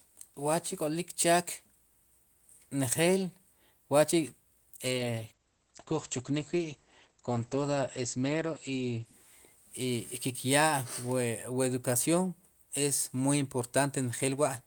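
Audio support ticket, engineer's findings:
Call bitrate drop, 4.81–9.95 s: speech rough and muffled, highs cut near 8 kHz for about 4.1 s. Fits Opus encoder throttled from roughly 32 to 12 kbps after the bandwidth estimate fell.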